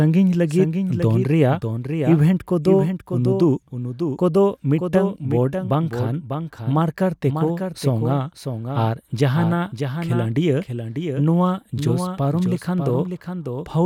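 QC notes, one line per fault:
Throughout, doubled audio track. A second full-band copy of the speech trails the original by roughly 0.7 s, a few dB quieter. It has no decay or room colour. Likely cause: a slower second capture path, or two copies held out of step.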